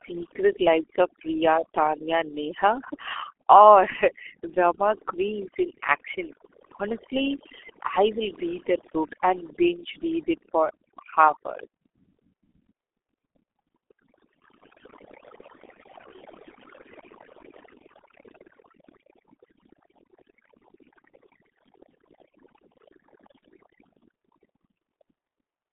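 Across the whole recording, overdone noise removal has been applied. The suppressor pulled individual frequency bands down to nothing wherever they sat close to its noise estimate, so the background collapses into near silence with twinkling specks, and the quieter parts of the speech go with it.

Running through the entire clip as well is the sound of the G.723.1 codec at heavy damage. The speech is confined to a telephone band of roughly 300 Hz to 3.4 kHz, with nothing above 3.8 kHz, which fits a rate of about 6.3 kbit/s. The coarse, slow-updating speech model leaves the speech muffled and hoarse, and consonants smear together.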